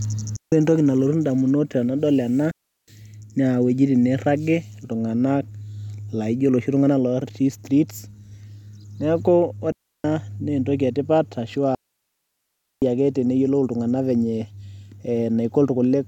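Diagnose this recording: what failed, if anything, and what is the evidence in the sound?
Digital wireless dropout at the radio link: clean muted holes at 0.36–0.52, 2.51–2.88, 9.72–10.04 and 11.75–12.82 s. The receiver mutes on data loss, with no noise burst, unlike analogue dropouts.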